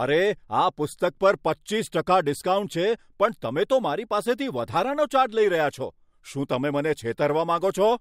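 No technical faults are audible.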